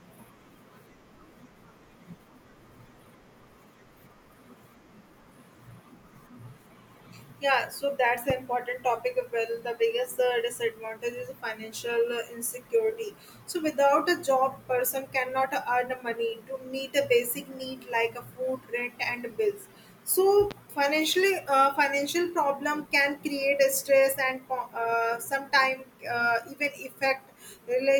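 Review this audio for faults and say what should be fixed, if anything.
A sudden voltage step entered the signal chain twice, likely from a plug being disturbed, a switch, static discharge or a driver glitch. Each step became a single loud pop about 10 dB above the speech, with the talking continuing underneath. The first sits at 8.30–8.33 s, just after "so that's". The second sits at 20.51–20.54 s, just before "financially uh financial problem". Both pops should be repaired with a click-removal or spectral-repair tool. Securing cables and connectors, grounding the setup against static and keeping switches untouched during recording would prevent these pops.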